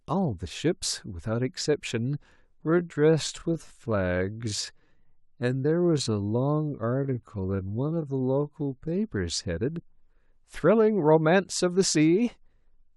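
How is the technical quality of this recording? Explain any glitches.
The recording has one clear glitch, a time-stretched section from 2.59 to 8.99 s. The likely cause is software lengthening this stretch of speech to fill a longer slot while holding its pitch, by repeating short slices of the waveform. Here the speech runs at about 0.67 times normal speed, so the pace drops abruptly at 2.59 s and recovers at 8.99 s with no change in pitch. Across that section the speech drags.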